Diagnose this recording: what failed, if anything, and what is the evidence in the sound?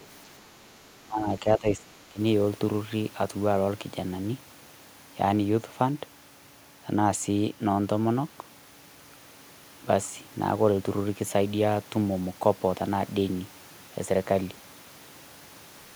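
Other side's voice leaking through, 0.00 to 0.06 s: a brief, very faint second voice sits far below the speech in the opening moment. The call-processing stage is the likely source. The far end was playing on a loudspeaker, its sound reached the microphone, and the echo canceller left a small residue that slipped through.

Speech suppressed in double talk, 1.04 to 2.19 s: the speech dips sharply, by around 20 dB at its deepest, with about a second of the span audibly pulled down. This again points to call processing, most likely the echo canceller. With both sides talking at once, it could not tell the local speech from the loudspeaker echo and attenuated both together.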